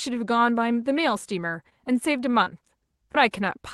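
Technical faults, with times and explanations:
1.69–1.73 s: short concealed packet loss. About 20 ms of speech never arrived. The receiver continued the last sound to fill it, leaving a brief smear.
2.31–2.35 s: short stall from a late packet. A packet came late and the buffer ran dry. The last sound was held about 21 ms, then speech resumed intact.
2.43–2.48 s: short concealed packet loss. Another 20 ms went missing. About 31 ms of synthetic continuation blends back, heard as a brief wobble.
3.12–3.16 s: short concealed packet loss. Roughly 20 ms of speech was lost and patched with extrapolated sound, giving a short smear before normal audio returns.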